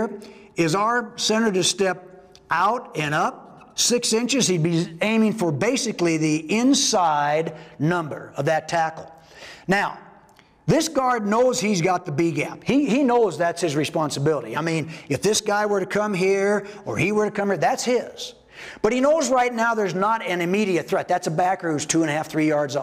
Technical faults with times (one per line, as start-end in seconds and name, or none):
none